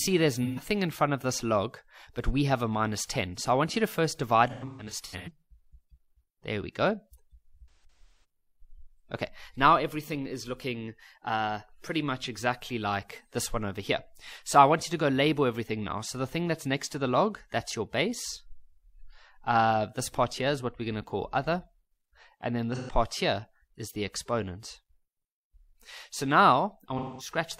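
Brief smeared, noisy patches break the sound at 0.44 s, 22.75 s and 26.98 s (about 130 ms, 130 ms and 210 ms), while 4.49 to 5.29 s and 7.71 to 8.24 s carry clusters of such gaps, each run up to about 150 ms. This is AAC frame loss with concealment: blocks of coded audio went missing, and the decoder covered each hole by reshaping the last good spectrum.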